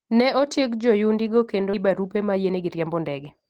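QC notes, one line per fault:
1.73 to 1.75 s, skip ahead: right after "otieg joyundigo kendo" the speech jumps forward with no gap at all, losing roughly 0.7 s. That stretch was dropped, either on the way or by an overfull jitter buffer, while newer audio was already queued, so the two sides butt straight together.
1.83 to 3.47 s, jitter buffer speed-up: the rest of the clip plays about 17 percent fast at unchanged pitch, so it sounds hurried. The receiver was trimming tiny pitch-period slices over and over to drain excess delay, around 0.3 s in total.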